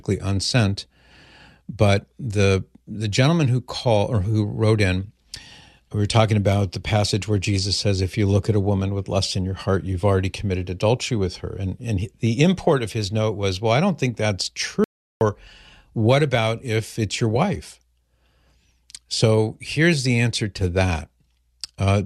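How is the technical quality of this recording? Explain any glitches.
The recording has one clear glitch in the speech. At 14.84 s the sound cuts out abruptly, and it returns at 15.21 s. This is an audio dropout to silence lasting about 370 ms. The likely cause is a brief loss of the input signal while recording continued, filling the gap with silence. Room tone vanishes entirely, leaving a flat line on the waveform and a blank vertical band on the spectrogram.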